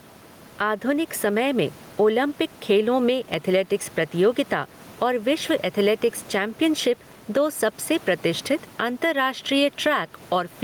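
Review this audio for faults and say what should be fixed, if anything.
Gain pumping runs through the whole recording: the gain swings by around 10 dB, likely from excessive gain driving a fast limiter. Unlike a noise gate, which cuts the gaps to silence, this pulls the gain down on loud sounds; the room noise sits normally about 30 dB below the speech. To prevent it, lower the input gain so peaks sit well below the limiter's threshold.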